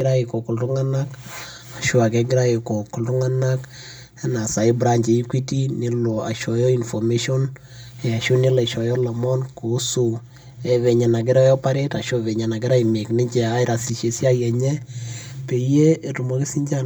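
Throughout, channel delay (comb filtering) makes the speech hollow: one channel lags about 5 ms, cancelling near 100 Hz and upward, drawing evenly spaced dark horizontal stripes on the spectrogram.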